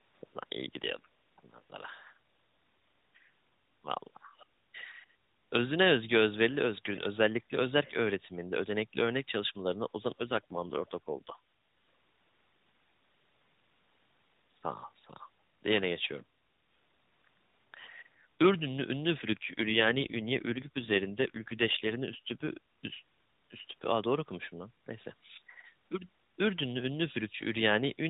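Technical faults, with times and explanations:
4.37–4.46 s, 6.49–6.58 s, 7.84–7.92 s: echo leak. Brief, faint delayed copies of the speech trail about 405 ms behind, most likely from a far-end loudspeaker the echo canceller did not fully suppress.
10.18–11.36 s and 19.18–22.58 s: AMR rate drop. Speech turns rougher and more synthetic with no gap or band change, which fits the narrowband codec dropping from 12.2 to 5.9 kbps.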